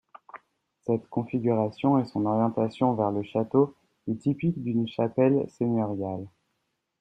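No technical faults can be heard anywhere in this speech recording. There are no events to place in time order.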